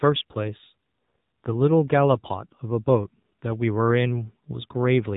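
From the first moment to the last, the speech carries the AMR narrowband mobile codec sound. Everything above about 3.8 kHz is simply gone, so the voice is boxed into that flat telephone band. On top of that the codec damage is plainly audible: a buzzy, synthetic edge where the vocal-tract model is fed too few pulses per frame, which points to one of the lower AMR-NB modes, around 7.4 kbps.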